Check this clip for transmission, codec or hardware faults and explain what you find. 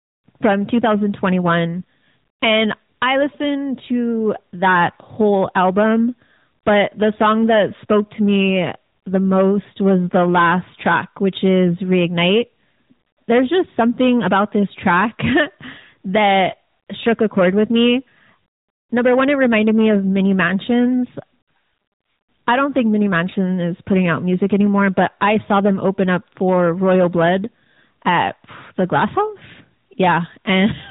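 Two faults run through the whole recording: hard clipping and AMR narrowband mobile codec damage.

Hard clipping is present from start to finish. A stage in the chain was driven about 10 dB beyond what it could pass, so a few percent of the samples hit the ceiling and were sliced flat. Those squared-off peaks create high harmonics, giving the louder syllables a harsh, fuzzy crackle.

The AMR narrowband mobile codec also affects the entire clip. The speech went through a 2G/3G-style phone codec that samples at 8 kHz and rebuilds the voice from a vocal-tract model plus sparse pulses. Nothing above 3.8 kHz survives, so the speech sounds muffled and boxy, with plainly audible buzzy, synthetic coloration that points to a mid-rate mode of about 10 kbps.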